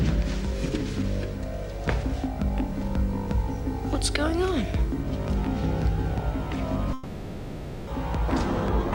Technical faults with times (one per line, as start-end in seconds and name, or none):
6.93-7.89 long network dropout